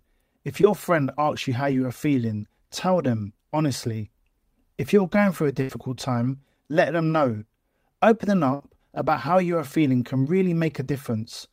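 At 0.61 to 0.64 s, just before "friend asks you how", there is a short concealed packet loss. About 20 ms of the speech did not arrive in time. The receiver covered the gap by extending the preceding sound, then blended back into the real signal. It is heard as a brief smear. A second, smaller one comes at 1.72 s. Only about 10 ms is missing there.

At 5.62 to 5.70 s, between "you're going through a" and "time let them know", there is a burst of packet loss. About 70 ms went missing in one run. The receiver held the last sound and let it fade. That gives a short held buzz or hiss before the speech resumes with that stretch gone. A second burst comes at 8.54 to 8.61 s, just before "about how you are". It loses about 60 ms and sounds the same way, with a brief fading hold before the speech picks up again.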